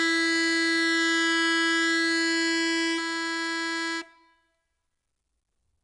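Music carrying two faults throughout. A doubled audio track sits about one second behind the original and roughly 5 dB quieter, likely from a second, slower capture path mixing the same signal back in. It differs from echo or reverb because the copy is full-band, has no decay or room colour, and does not repeat. Plainly audible 4-bit ADPCM compression adds gritty hiss that rises and falls with loudness and roughens sharp attacks, unlike steady background noise. Nothing remains above 10.8 kHz, which fits a low-rate ADPCM stream of around 89 kbps.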